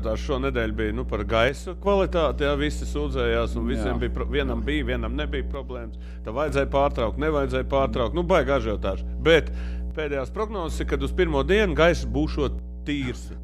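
Mains hum at 60 Hz runs from the start to the end. A ground loop or a transformer near the signal path has let the power line leak into the audio, and it sits underneath everything as a constant low tone at 60 Hz, close to the level of the sound itself. It does not fade or shift between events, so it stays audible in quieter passages as well as busy ones.

One channel drops out at 1.49 to 1.86 s, 5.55 to 6.49 s, 9.91 to 10.69 s, and from 12.59 s to the end. Each time, the level falls abruptly by 6 dB and, except for the last, then returns, while the character of the sound stays the same. That pattern is likely a stereo source whose channels carried identical material, with one side briefly lost before being summed to mono. It leaves four sudden dips in loudness rather than any change in tone.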